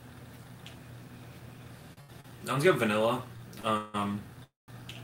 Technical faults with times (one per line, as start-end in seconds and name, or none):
1.93-2.26 short stall from a late packet
3.37-3.65 short stall from a late packet
3.77-3.96 call audio freeze
4.44-4.70 call audio freeze